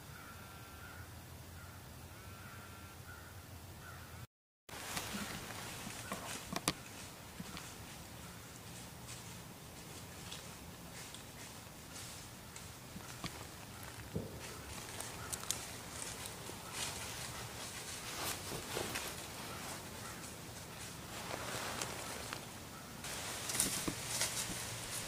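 No technical fault can be heard anywhere in the audio.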